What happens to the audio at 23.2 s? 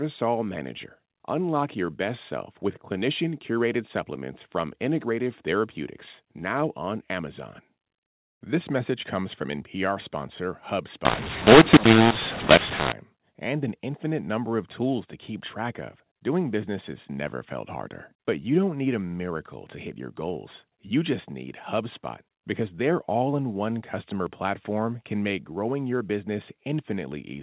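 At 23.2 s the speech is intact, passing through the usual G.711 telephone coding with its band ending at 4 kHz and no fault at that moment.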